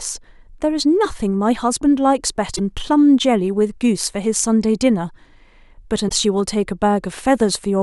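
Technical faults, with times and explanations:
2.55–2.59 s and 6.08–6.12 s, broken MP3 bit reservoir: both times the speech skips forward with a brief glitch lasting about 40 ms, roughly 1.6 to 1.7 frames at the 26 ms MP3 frame length. The likely cause is frames dropped from the stream; the frame after each gap reaches back into the reservoir for borrowed bits, gets bytes from some other frame instead, and decodes them wrongly for that short moment before the audio settles again.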